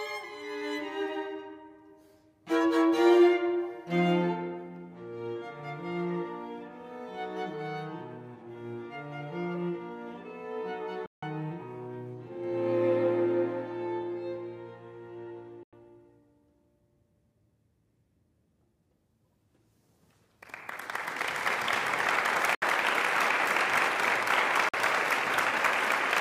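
The audio cuts to silence four times: 11.06 s (160 ms), 15.63 s (90 ms), 22.55 s (70 ms), 24.69 s (50 ms). Each is likely a Bluetooth dropout. Sound resumes as if it kept playing.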